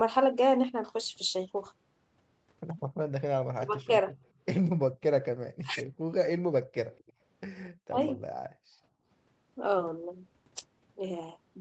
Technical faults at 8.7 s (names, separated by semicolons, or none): background gated by the echo canceller